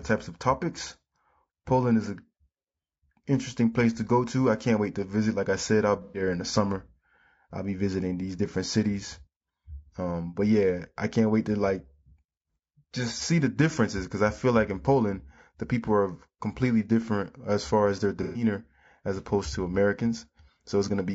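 Across the whole speech clip the voice has a rough, grainy texture, with hiss filling the gaps between the harmonics and a top band that sounds thin and synthetic. The likely cause is low-delay AAC compression, AAC-ELD, at a rate around 32 kbps. Its short frames cannot separate the pitch harmonics cleanly. Because the damage is steady rather than arriving in bursts, it sets the baseline against which the dropouts stand out.

From 6.02 to 6.22 s, and again from 18.23 to 18.43 s, the sound briefly turns smeared and phasey. These are AAC frame loss with concealment events, each covering about 120 ms of missing audio, which fits a few lost frames. The decoder rebuilt the gap from the last good spectrum, so the patch holds a noisy, washed-out copy of the preceding sound. These gaps are too short to fade into silence. A plain dropout would go silent or click instead.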